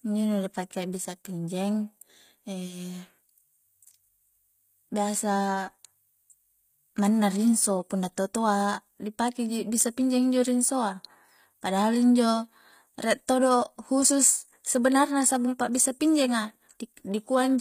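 A speech recording run through a low-bitrate codec, most likely HE-AAC compression, with a sound that fits roughly 24 kbps. The treble is rebuilt from copied lower bands, so sibilants come out gritty and metallic throughout, and nothing is present above 15.5 kHz.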